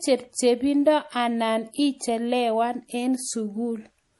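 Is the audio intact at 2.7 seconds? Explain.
No. MP3 compression runs throughout the clip, likely at a low bitrate. Nothing sounds above 11.5 kHz, and weak frequency lines switch on and off, giving a watery, swirly texture.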